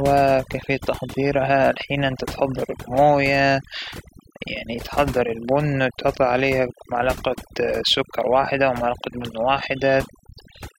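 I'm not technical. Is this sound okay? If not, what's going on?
No. A noise-reduction tool was set too strong, which is overdone noise removal. Throughout the speech, it switched off any part of the sound it mistook for background noise, including quiet parts of the voice. The background drops and breaks up into twinkling, warbling specks.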